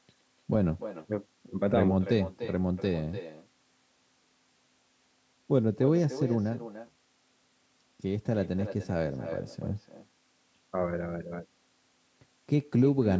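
From start to finish, every phrase of the speech is trailed by a fainter, thinner copy of itself arriving roughly a third of a second later, sitting about 13 dB below the direct voice. This is echo with no canceller: the far end played the call through a loudspeaker, its microphone caught that playback, and nothing subtracted it before it travelled back across the network. The returning copy, like the direct voice, carries nothing above 8 kHz.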